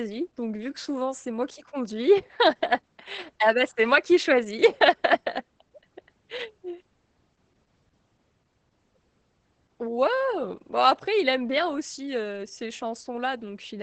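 Opus voice compression runs through the whole recording, with the coder working in its SILK linear-prediction mode at a wideband setting and a bitrate low enough that the heavy damage fits roughly 10 kbps. Nothing is left above about 8.8 kHz, so the speech sounds muffled, and the coarsely coded excitation gives it a hoarse, slightly robotic edge from start to finish.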